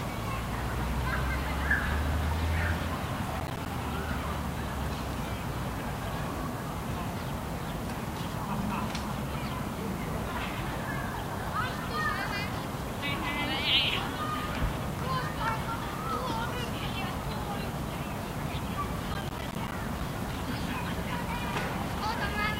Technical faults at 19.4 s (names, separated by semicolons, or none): processor overload crackle